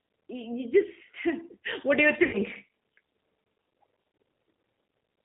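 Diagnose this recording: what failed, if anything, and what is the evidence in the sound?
The codec stage is at fault throughout: the speech has the slightly rough, synthetic texture of the G.729 codec, and the damage is plainly audible. The band runs only from about 200 Hz to 3.7 kHz, which points to a narrowband telephone path at around 8 kbit/s. The decoder rebuilds each 10 ms frame from a vocal-tract filter, a pitch predictor and a few pulses, so fine detail is replaced by a coarse approximation.

At the network stage, VoIP packet loss concealed by the speech codec occurs from 2.23 to 2.38 s, just after "what do you". For roughly 100 ms the decoder had no data, which fits five 20 ms packets lost. It extrapolated from its last pitch and filter state with falling gain, so the sound is stretched out and fades. Because each frame builds on the previous one, the speech stays weak or distorted for a short time after packets resume.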